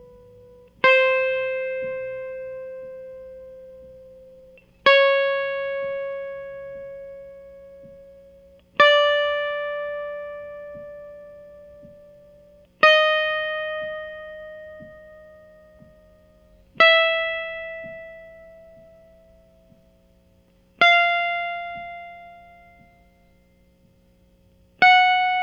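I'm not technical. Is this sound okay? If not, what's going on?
Yes, this sound is okay; there's nothing going on with it that needs fixing.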